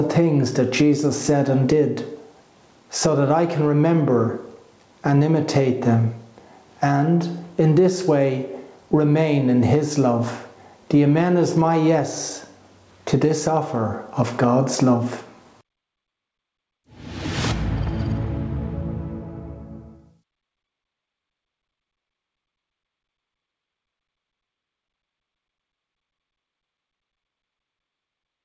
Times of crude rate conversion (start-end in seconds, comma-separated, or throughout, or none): none